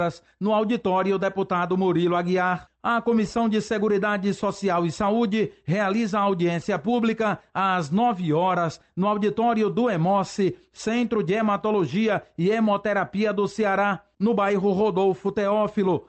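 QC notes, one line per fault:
No faults are present in this clip. The audio comes through a call path whose top end stops at about 8 kHz, which fits Opus coding at a low call bitrate near 24 kbps.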